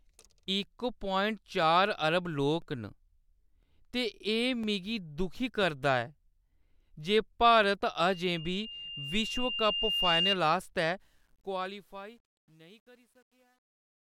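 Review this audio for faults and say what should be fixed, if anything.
Periodic USB or driver dropouts occur from 0.63 s to 7.63 s, about once every 1.0 s. A background task stalls the audio driver or USB bus, and about a millisecond of sound is replaced by silence each time, heard as regular ticks. To prevent this, use a larger driver buffer and disable whatever polls the bus at one-second intervals.

A loudspeaker feedback squeal runs from 8.03 s to 10.39 s. The microphone picks up its own loudspeaker, and a 2.8 kHz tone reinforces itself around the loop, swelling over roughly two seconds until it sits a few dB above the signal. To prevent this, lower the monitor gain, move the microphone away from the speaker, or notch out 2.8 kHz.

Truncation distortion on a fade covers 11.00 s to 14.02 s. The fade stage keeps only 10 bits without dither, so as the level drops the waveform collapses into coarse steps, turning gritty, worst from 11.93 s to the end. 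To prevent this, apply the fade at higher word length and dither when reducing bit depth.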